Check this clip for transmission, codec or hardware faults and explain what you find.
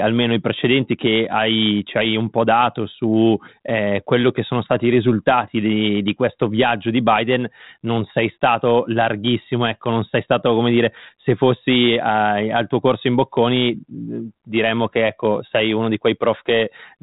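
Nothing in the speech points to a fault; it just sounds like G.726 telephone audio at 32 kbit/s, limited to below 4 kHz and carrying the light coding texture that rate normally leaves.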